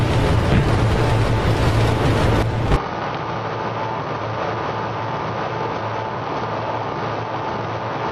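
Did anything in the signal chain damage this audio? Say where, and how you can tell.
Yes. From 2.76 s to the end, the sound turns duller and boxier in one step, with no gap at the change. Nothing is left above 6.2 kHz, the level falls by about 10 dB, and a new background noise sits roughly 50 dB below the signal. This points to the input stage. The likely cause is an input switched to a poorer device, a different microphone or headset path with narrower bandwidth and its own tone and noise.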